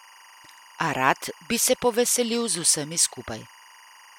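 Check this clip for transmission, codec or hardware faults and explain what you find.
One hardware fault runs through the speech from start to finish: timecode bleed. Linear timecode at 24 frames per second leaks in from a neighbouring line, roughly 25 dB below the speech, as a square wave flipping between about 1 and 2 kHz. It sounds like a steady chirping warble. A spectrogram shows two constant bands near 1 kHz and 2 kHz, and the waveform keeps a low-level fill even in pauses.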